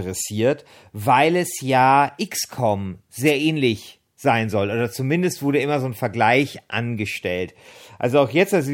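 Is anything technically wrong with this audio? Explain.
Yes. At 3.26 to 3.32 s there is a wireless microphone noise hit: the analogue FM radio link briefly faded as reflected signals cancelled, letting receiver noise surge up, so a short swish of static lasting about 60 ms is heard.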